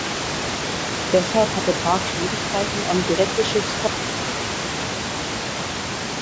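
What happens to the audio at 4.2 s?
At 4.2 s the clip is inside an audio dropout to silence. The input feed was likely lost, perhaps through a disconnected device or a failed link, while recording carried on writing silence. Right after "eine direkte", at 3.88 s, the speech stops mid-flow and stays gone to the end of the clip. The low room noise vanishes too, leaving dead silence, and whatever was said after that point is lost.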